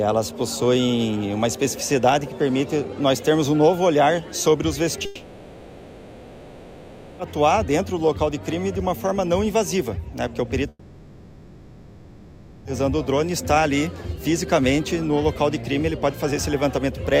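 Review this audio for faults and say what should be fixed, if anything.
Two gaps occur, at 5.05 to 7.21 s and 10.69 to 12.67 s. Both sound like a long network dropout, likely from lost packets. A fading buzz fills about 2.1 s and 2.0 s. The audio then resumes, missing that stretch. Packet redundancy or retransmission with deeper jitter buffering would prevent this.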